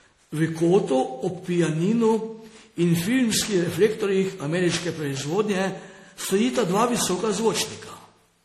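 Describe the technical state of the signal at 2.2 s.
At 2.2 s the speech carries generation loss, present across the whole clip: a swirly, hollow smear with blurred consonant attacks and nothing above 16.1 kHz. That is more damage than one low-bitrate pass would cause, pointing to MP3 around 64 kbit/s, likely re-encoded about ten times.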